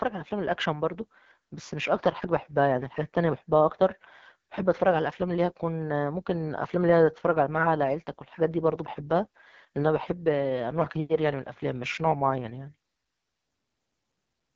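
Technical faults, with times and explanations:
Throughout, AMR wideband (HD Voice) codec: a low-rate model coder rebuilds the speech, making it rough and raspy with nothing above 7.5 kHz, which fits 8.85 kbit/s.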